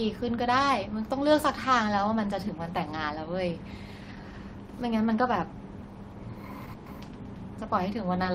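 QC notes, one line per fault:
6.65–6.69 s, short stall from a late packet: one sound is held about 20 ms too long. The jitter buffer ran empty, so the last sound was stretched and nothing was lost.
6.73–6.94 s, call audio freeze: the sound hangs on and fades for about 130 ms, never reaching silence, then resumes where it stopped. The likely cause is delayed packets draining the jitter buffer.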